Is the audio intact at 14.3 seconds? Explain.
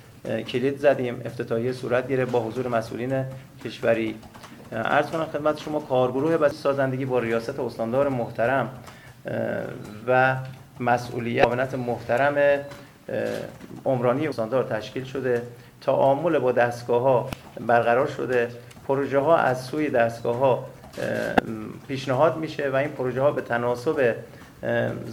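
No. Damaged data in a compressed stream corrupts the frames between 14.29 and 14.32 seconds, so the decoder misreads them, loses sync and hunts for the next valid frame header. The result is a brief chirp or blip lasting about 36 ms.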